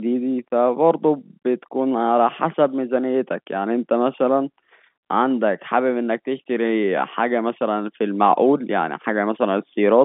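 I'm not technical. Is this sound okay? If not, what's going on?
Yes, nothing in this speech recording sounds broken. It has the slightly thin, boxed-in quality of an ordinary landline call, because it went through standard telephone coding (G.711), which carries nothing above about 3.8 kHz.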